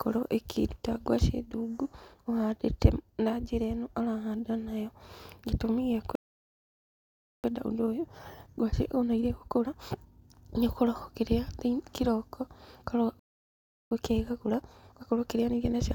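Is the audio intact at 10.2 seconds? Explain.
No. The player stalled and ran a time-compressed catch-up from 7.44 to 10.44 s, splicing out small pieces at 1.25x, so the speech sounds hurried at normal pitch.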